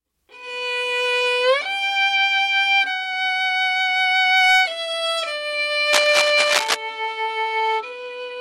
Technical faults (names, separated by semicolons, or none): cable scratch noise